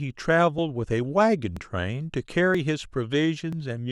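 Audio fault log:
0.59 s, 1.57 s, 2.55 s, 3.53 s: audio missing between chunks. The speech jumps forward slightly at each point, as if a sliver of sound was snipped out and the edges butted together with no gap. About 20 ms goes missing each time, and the skips recur roughly once a second. This most likely comes from a recorder or processor handling the audio in 1-second chunks and dropping about 20 ms while handing over from one chunk to the next.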